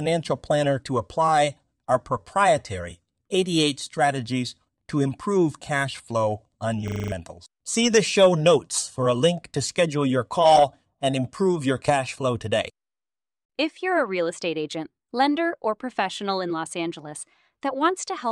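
Right after "improve cash flow on", from 6.88 to 7.12 s, a system hang loop replays one 40 ms slice six times while the system stalled. It sounds like a 25 Hz buzz, and about a fifth of a second is lost. The waveform shows identical repeating blocks, and the spectrogram shows evenly spaced vertical stripes.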